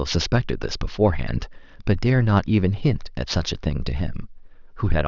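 Throughout, aliasing: content above 6 kHz was not filtered before downsampling, folding back as gritty, metallic sibilance, unlike plain band-limiting, which would sound dull rather than harsh.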